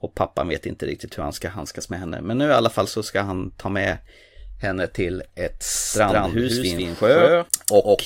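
From 5.75 s to the end, the speech carries a doubled audio track: a second, full-band copy at about equal level trails the original by roughly 150 ms, with no decay or room colour. It begins abruptly, likely from a slower capture path recording it again.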